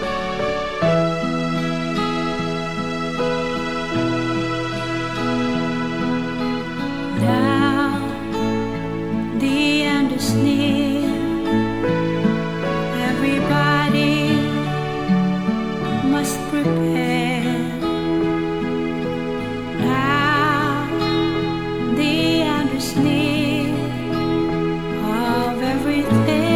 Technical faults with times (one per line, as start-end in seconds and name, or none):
none